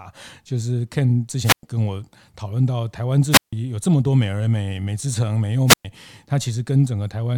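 The radio link from an analogue FM microphone fades three times, and each time the receiver's squelch shuts the output off: a wireless microphone squelch dropout. At 1.43 to 1.63 s, 3.31 to 3.53 s and 5.67 to 5.85 s the speech gives way to a brief surge of hiss, then a hole of near silence lasting about 109 ms, 155 ms and 114 ms respectively, before the speech returns.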